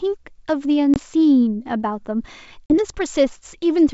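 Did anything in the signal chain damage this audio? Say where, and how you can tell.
Yes. Network stage: packet loss on an ADPCM call. Hard silent gaps at 0.94 s (20 ms) and 2.66 s (40 ms), then brief roughness while the decoder's predictor and step size re-align.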